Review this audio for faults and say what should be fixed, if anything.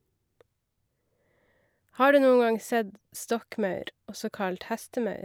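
Nothing in the speech signal needs fixing, as no technical faults can be heard anywhere in the recording.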